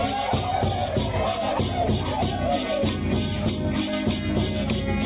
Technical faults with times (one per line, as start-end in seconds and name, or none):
none